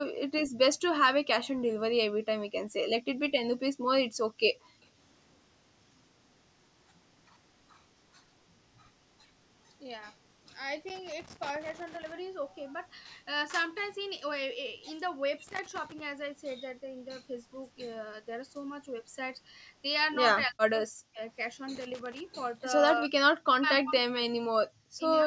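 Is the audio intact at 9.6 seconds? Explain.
Yes, the speech at 9.6 seconds is intact, with only the normal call microphone processing audible as the usual trimmed low bass and nothing above about 8 kHz.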